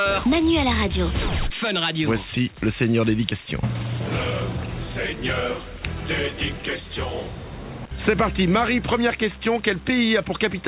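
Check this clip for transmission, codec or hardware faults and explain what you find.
Nothing stood out on listening; the only thing heard is the narrow band of the call path, with nothing above about 4 kHz.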